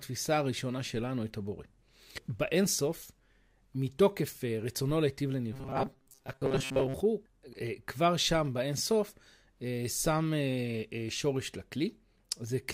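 Robotic sound from repeated short buffers runs from 5.53 to 6.95 s, turning the audio into a stiff, metallic buzz at 134 Hz. This likely comes from audio arriving too slowly, so a fragment of about 7.5 ms is replayed in place of most of the real sound.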